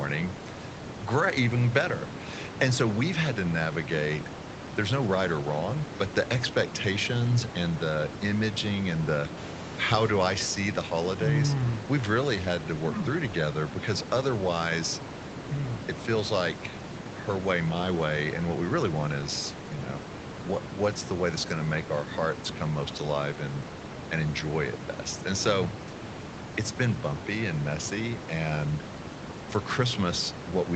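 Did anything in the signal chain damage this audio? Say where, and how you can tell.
No, nothing in the chain damaged this speech; the top end stops at about 8 kHz, as expected from the call path's Opus codec and microphone processing, and the room's background noise sits roughly 12 dB under the talking.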